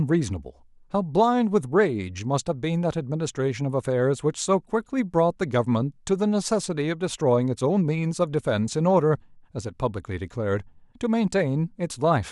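No technical faults can be heard anywhere in the recording.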